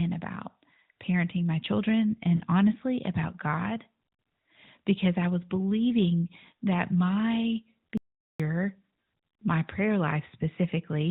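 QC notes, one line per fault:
2.36–2.41 s, lost AMR speech frames. The sound briefly dips and warbles for 40 ms, which fits two lost 20 ms frames. The decoder filled the gap by repeating the last good pitch and vocal tract settings at falling gain. Speech stays band-limited below 4 kHz there.
7.97–8.40 s, audio dropout to silence. The sound cuts out mid-flow for about 0.42 s. The gap is silent with no room tone. The likely cause is a lost input while recording kept writing silence. Anything spoken then is gone.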